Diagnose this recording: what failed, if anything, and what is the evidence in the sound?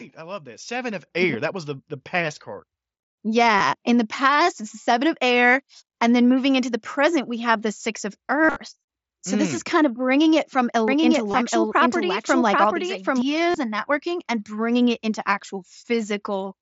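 In call processing, the automatic gain control raised the microphone's input volume in a single step at 1.02 s. Speech and background noise jump up together by about 7 dB and stay at the new level, with no fade.

On the Bluetooth headset link, voice packets were lost and concealed. The receiver refilled each gap by repeating the best-matching recent waveform. This happens at 3.59 s (15 ms), at 4.83 to 4.87 s between "the past it's the" and "of air", at 8.44 to 8.56 s after "have the six of", at 11.31 to 11.34 s, and at 13.51 to 13.55 s before "and networking and bringing". The longest runs, including a 45 ms stretch inside the scattered 120 ms burst at 8.4 s, turn into a held buzzy tone that warbles as real audio resumes. Shorter gaps are nearly hidden. All of this rides over the mSBC headset codec, which limits speech to 8 kHz and adds light graininess.

From 10.88 to 13.22 s the audio is a doubled audio track. 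A second full-band copy, at roughly the same level, trails the original by around 0.7 s, with no room colour. It switches in and out abruptly. The likely cause is the signal being captured a second time by a slower path or being duplicated in editing.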